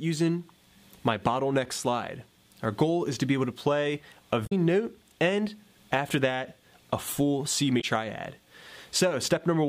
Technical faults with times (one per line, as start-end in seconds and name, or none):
4.43-4.52 damaged data in a compressed stream
7.77-7.84 damaged data in a compressed stream